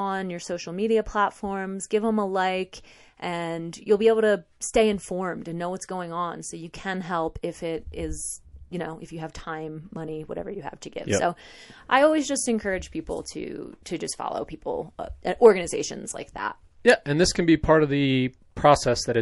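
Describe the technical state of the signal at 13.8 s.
At 13.83 to 13.86 s the encoder kept its long transform window of roughly 48 ms across a sharp onset instead of switching to short blocks. Quantisation noise sized for the loud attack spread about 27 ms ahead of it, so a hiss rising about 13 dB precedes the onset, which sounds soft and smeared. This is pre-echo.

Underneath, the whole speech track carries plainly audible MP3 compression, likely from encoding at a low bitrate near 48 kbps. Starved of bits, the codec drops weak spectral lines frame to frame, leaving a watery, swirling texture and metallic chirps on s sounds.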